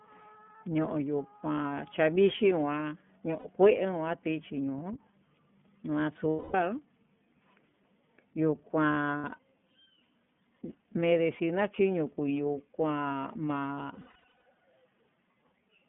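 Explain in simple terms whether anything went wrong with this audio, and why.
The whole recording went through the iLBC codec, a narrowband phone codec that drops everything above about 3.4 kHz, so the speech sounds muffled, slightly rough and synthetic.

There are also lost iLBC frames at 3.39–3.49, 6.30–6.55 and 9.18–9.25 s, plus a scattered run of short losses from 13.94 to 14.43 s. The decoder fills each gap with a held, buzzy smear, and clear audio comes back right after.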